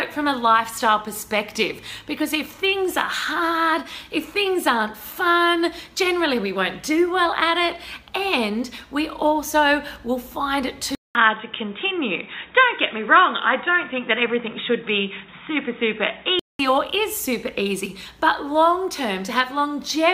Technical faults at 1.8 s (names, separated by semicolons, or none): none